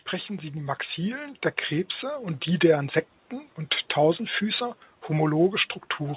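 Automatic gain rising from 0.1 to 1.45 s: the gain control judged the speech input too quiet and raised its gain by about 6 dB, so speech and background noise swell together over that stretch, heard through a call path whose cutoff near 4 kHz fits narrowband G.711.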